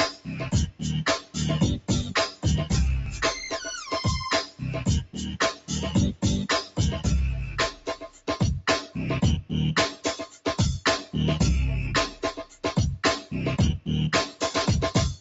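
A noise suppressor applied to music or sounds runs through the whole clip. It was built for speech, so it treats steady tones, ambience and tails as noise. The level swings by around 10 dB. The sound pumps and thins between attacks.

Sound cut by the noise suppressor comes in six stretches: 0.1 to 2.45 s, 3.84 to 6.78 s, 7.71 to 8.28 s, 8.86 to 10.46 s, 12.1 to 12.64 s and 13.21 to 14.42 s. Held sounds sink by up to about 15 dB, and by about 11 dB in the fifth stretch. Decays end early. Sudden onsets still come through.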